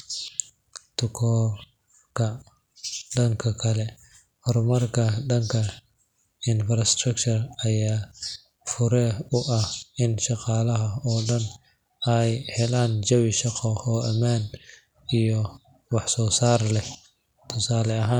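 Nothing technically wrong turns up anywhere in this speech recording, so there's no fault to pin to a time or trace to a cause.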